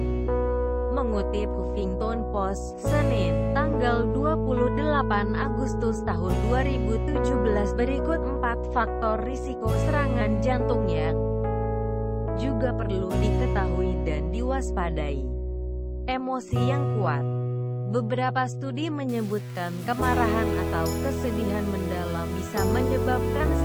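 From 19.09 s to the end at 23.64 s, the sound turns grainy, with distortion that tracks the signal and roughly 25 dB below it. This is likely low bit depth without dither, consistent with rounding to about 6 bits, so quiet passages grit and sputter.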